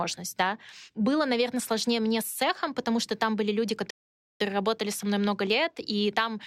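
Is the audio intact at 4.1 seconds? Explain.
No. At 4.1 seconds the speech is in a rebuffering stall lasting from 3.90 to 4.41 s. The audio drops to silence after "что там были люди" because the player has exhausted its downloaded data and halts playback until more arrives. It then picks up exactly where it paused, at "работали со мной много". No material is skipped, but the gap adds about 0.5 s of silence to the clip's running time.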